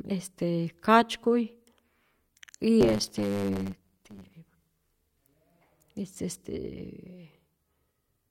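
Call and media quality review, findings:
Block size mismatch (truncated), 2.80–4.33 s. 100 Hz buzz over speech. Speech runs 1.16x fast, pitch near normal. Probable buffer handoff between stages. Writer's blocks, consistent with 512 samples, are longer than reads, so each block's tail is dropped.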